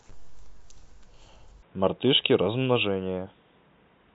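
From 1.63 s to the end, the speech turns dull and boxy with nothing above 3.8 kHz, likely an input switched to a poorer device, with a faint new noise floor.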